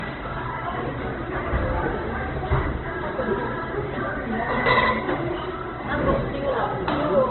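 From start to finish the sound is dull and band-limited, with nothing above 4.2 kHz and the artefacts of an earlier encoding still present. This is low-bitrate audio saved at a high bitrate: the material was likely squeezed first through a very low-rate codec, around the 12 kbit/s range, then re-encoded as high-rate MP3. The second pass cannot restore what the first discarded. On a spectrogram, energy ends abruptly in a flat ceiling at 4.2 kHz, with empty black space above it.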